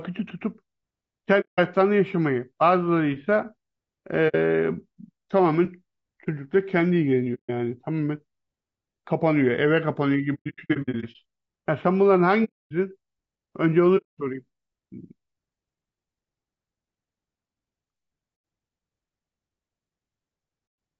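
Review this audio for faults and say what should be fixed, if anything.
The speech is rough and grainy throughout, with a hiss-like fill between the voice's harmonics and a top band that sounds thin and synthetic. The cause is likely low-delay AAC compression (AAC-ELD) at a bitrate that sounds to be around 32 kbps. Its short analysis frames separate pitch harmonics poorly and spend bits quickly, so at this rate the encoder cannot describe the voice cleanly. To prevent it, encode at a higher bitrate or use a codec mode that tolerates more delay.

Short, soft-edged dropouts occur at 1.40–1.59 s, 4.28–4.35 s, 7.34–7.50 s, 12.44–12.73 s, 13.97–14.19 s, 18.35–18.44 s and 20.66–20.78 s. Between 10.34 and 11.16 s there is a cluster of brief gaps whose longest run is about a tenth of a second. The sound fades out and back in. This is AAC frame loss with muting: lost frames were decoded as silence, and the overlapping windows smoothed the edges. 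To prevent it, protect the transmission path or enable packet loss concealment in the decoder.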